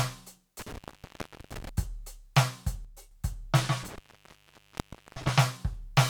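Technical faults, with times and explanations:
0.59 to 1.69 s, intermittent contact: the music cuts out for about 0.73 s within this span, with crackle where the connection breaks and remakes. While the line is open, only faint hiss remains, with no signal passing. This is a loose plug or cable briefly losing contact.
2.85 to 3.11 s, one channel drops out: for about a quarter of a second the music falls abruptly by about 6 dB and then returns to full level. Material shared by both channels stays audible but quieter, and anything carried only on one side vanishes. The likely cause is one stereo channel being lost before the signal is summed to mono, which halves the common content.
3.83 to 5.31 s, intermittent contact: a longer break of about 1.18 s in this span, again framed by crackle as the contact opens and closes. In the gap the music is gone and faint hiss is left. The loose connection produces both the clicks at the edges and the silence between.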